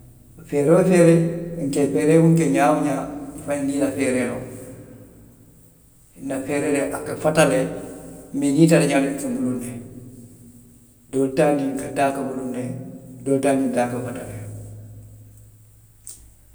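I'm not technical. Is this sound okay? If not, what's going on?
Yes, nothing in this recording sounds wrong.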